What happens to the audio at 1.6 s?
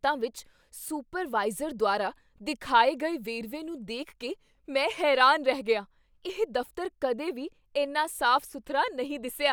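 Nothing goes wrong at 1.6 s; the speech carries on intact through that moment with no dropout, click or distortion.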